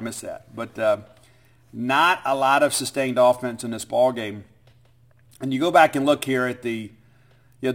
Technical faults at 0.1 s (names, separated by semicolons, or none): crude rate conversion